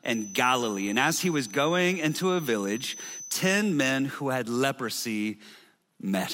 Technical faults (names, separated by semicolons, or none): feedback whistle